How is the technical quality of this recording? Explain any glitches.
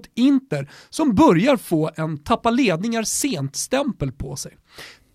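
One glitch stands out. At 3.21 s, just after "få en tappa ledningar", an electrical switching spike adds a sharp snap reaching around -10 dBFS, likely from a nearby switch arcing onto the line. Unlike a dropout, it adds sound rather than removing any.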